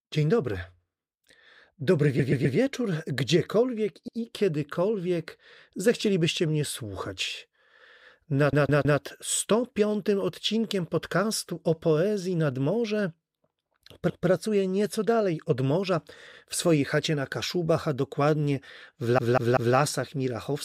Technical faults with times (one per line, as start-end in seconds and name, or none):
2.19-2.57 repeated frames
4.08-4.17 repeated frames
8.53-9.01 repeated frames
14.09-14.29 repeated frames
19.18-19.76 repeated frames